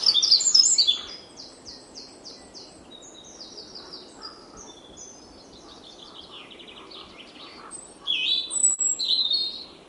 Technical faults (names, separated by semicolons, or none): short concealed packet loss